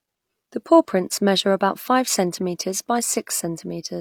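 No technical faults can be heard anywhere in the recording; the signal stays continuous and steady throughout.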